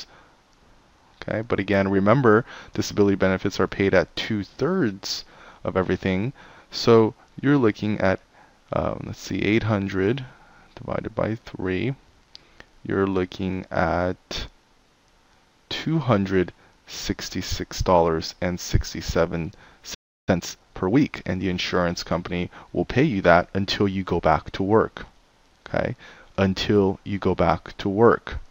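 A playback stall runs from 19.94 to 20.29 s: the sound stops mid-flow and the output goes silent for about 0.33 s before resuming. The likely cause is the player running short of buffered data or its output thread being briefly blocked.

Time-compressed catch-up follows from 20.29 to 20.93 s, as the player works off the backlog built up during the gap. Small pieces are cut out and cross-faded, so the audio runs about 1.5 times faster at its normal pitch.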